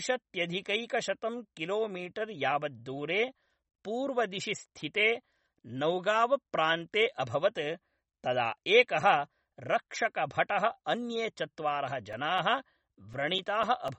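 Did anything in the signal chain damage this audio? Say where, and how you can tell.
Yes. Throughout the speech, nothing is present above 8.3 kHz, and the sound is plainly watery and smeared, likely from MP3 compression at a low bitrate near 33 kbps. A spectrogram shows a hard ceiling at 8.3 kHz, with patchy high bands flickering between frames.

Periodic USB or driver dropouts occur at the driver or buffer stage. From 12.13 s, right after "अन्ये चत्वारः", until 13.88 s, a tick repeats every 0.25 s, about seven times. Each is a few milliseconds of silence: evenly spaced flat notches on the waveform and thin vertical lines on a spectrogram.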